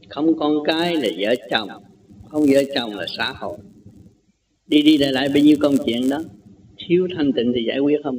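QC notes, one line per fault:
0.71–6.48 s, resampler restarted on every block: each 10 ms chunk converted separately, so edges glitch, giving a 100 Hz buzz under the signal, during 16 kHz to 48 kHz upsampling.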